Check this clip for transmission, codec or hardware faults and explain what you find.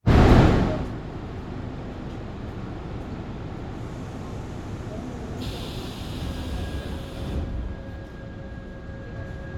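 One transmission fault stands out: a short burst of lost LE Audio frames.

Lost LE Audio frames, 6.81 to 6.88 s. Several short dropouts are scattered over about 60 ms, adding up to roughly 37.5 ms of missing audio. The longest gap is around 30 ms, which fits a handful of 7.5 ms LC3 frames. For each missing frame, the decoder repeats the previous spectrum with randomized phase signs. Tonal parts of the sound therefore turn into a brief noisy smear rather than a hard click. The gaps are too short for the fade toward silence to go far.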